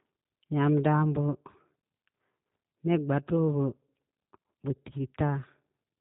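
Throughout, the speech has plainly audible G.729 codec damage: a rough, synthetic, pulse-rebuilt texture, which fits 8 kbit/s coding. A spectrogram shows nothing above 4 kHz.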